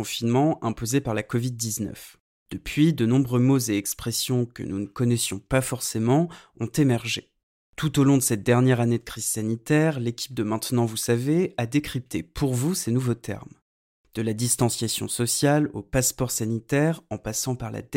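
No technical faults can be heard anywhere in the recording; the signal holds steady throughout.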